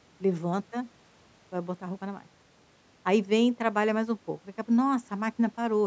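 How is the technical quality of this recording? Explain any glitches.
Listening to this speech recording, nothing stood out as a glitch, and the call microphone processing it passed through leaves the sound with nothing above 8 kHz and the lowest bass trimmed, as such processing normally does.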